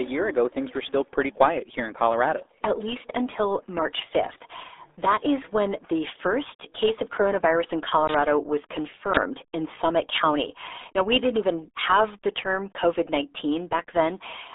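From start to finish the speech carries RealAudio 14.4 codec damage. Nothing above about 3.8 kHz survives, the band sits roughly between 300 Hz and 3.6 kHz, and heavy coding leaves it muffled and gargly, which fits an 8 kbit/s dial-up speech codec.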